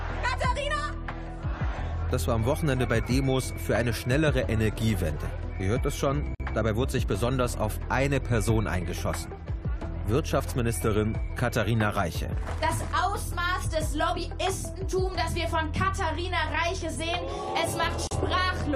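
Separately encoded pieces were joined without trimming encoder delay and padding, leaving a gap at each join: silences of about 51 ms at 6.35 s and 37 ms at 18.07 s, their edges smeared by the codec, before the sound resumes.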